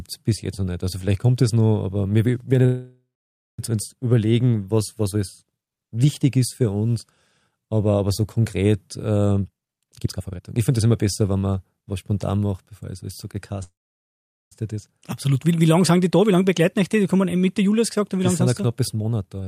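At 2.65 s, after "noch aber wir werden", the sound stalls for 0.93 s. It decays into a fading tail, then 0.54 s of silence. This is a call audio freeze, likely from delayed packets draining the jitter buffer. Speech resumes intact with "uns überlegen was was".

From 9.32 to 11.57 s, after "aber so konkret", a jitter buffer speed-up runs the speech at 141% without changing pitch. Roughly a second of tiny pitch-period slices is cut to shed the extra delay. The speech sounds rushed.

At 13.63 s, after "bevor es alles so", a second call audio freeze lasts 0.88 s. Most of it, 0.79 s, is silence. Nothing is lost.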